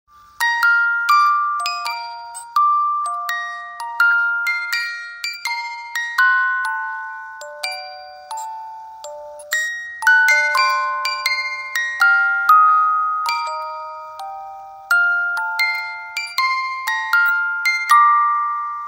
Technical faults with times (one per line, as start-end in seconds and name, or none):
none